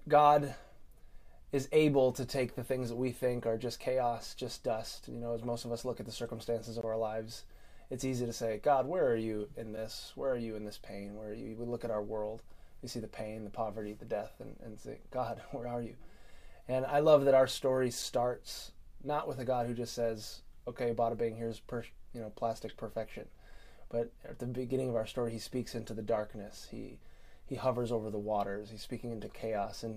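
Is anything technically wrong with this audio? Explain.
Yes. There are two blocks of digital silence, at 6.81 to 6.83 s and at 18.02 s. Output buffers went unfilled and dropped to zero. The 20 ms gap is a short hole. The 5.8 ms one, which fits a 256-sample buffer, is a click.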